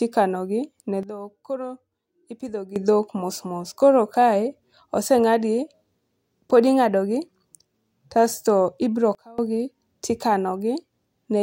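At 1.03 s the speech and its background noise drop together by about 12 dB until 2.76 s, then at 9.15 s fall by about 24 dB until 9.38 s. Each is a sudden gain jump, likely a digital gain change applied instantly without any ramp.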